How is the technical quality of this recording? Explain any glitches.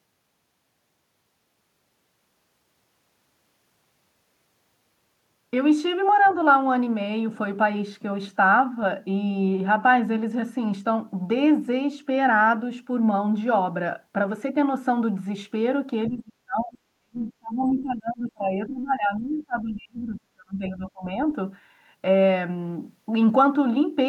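A couple of echo-canceller glitches stand out, one tiny and one quite noticeable.

Around 6.25 to 6.33 s there's a brief scrap of the other side's voice leaking through, very faint, something like 30 dB under the speech. It's most likely loudspeaker playback that the echo canceller didn't fully strip from the mic.

Then comes speech suppressed in double talk, from 16.09 to 16.79 s and again from 16.99 to 21.09 s. The voice sinks hard, by roughly 35 dB at its worst, across those four-plus seconds. The likely cause is both ends talking at once, with the canceller unable to tell its own talker from the echo and turning everything down.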